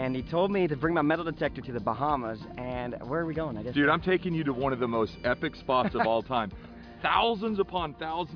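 No technical faults can be heard anywhere in this audio.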